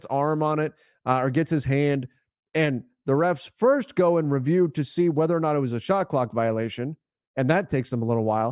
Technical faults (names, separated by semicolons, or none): none